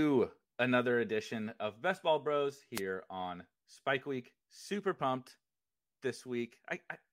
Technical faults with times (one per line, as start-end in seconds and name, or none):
2.74-2.81 wireless microphone noise hit